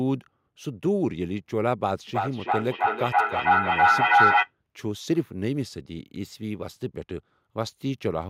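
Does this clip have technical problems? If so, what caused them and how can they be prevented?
Yes. From 2.08 to 4.52 s there's feedback echo between two devices. Two devices in the same room are on the call, and one of them plays back what the other's mic sent. That mic picks the sound up again, and its echo canceller can't remove audio coming out of a different device. Speech comes back roughly every third of a second, and the repeats pile up until they're about 8 dB louder than the speech itself. To prevent it, keep only one device joined with audio per room, or mute the mic and speaker on the extra device.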